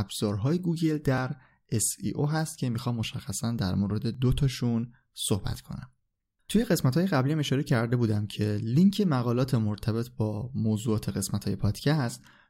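A dropped buffer (overrun) is the likely cause at 4.15 s: the recording software apparently failed to read a block of samples before the hardware overwrote it, so about 10 ms of audio never reached the file and the audio on either side was joined directly. In the speech this is heard as a small jump forward in the sound, not as a gap of silence.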